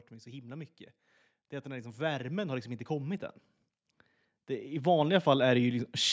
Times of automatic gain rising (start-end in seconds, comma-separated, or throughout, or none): 1.62-3.31, 4.68-6.00